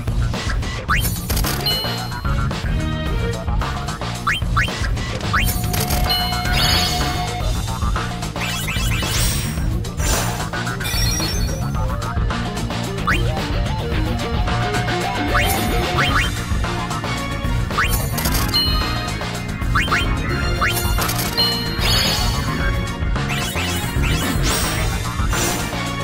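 From 0.08 s to 25.06 s, periodic USB or driver dropouts recur once every second. Something blocks the audio path on a fixed schedule. Each time, about a millisecond of sound is replaced by silence. The gaps are heard as regular ticks whenever signal is present.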